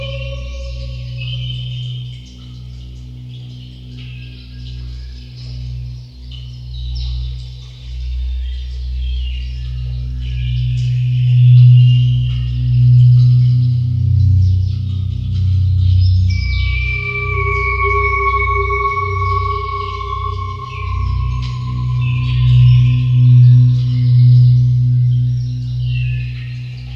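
Nothing in this audio stood out as a technical problem on listening.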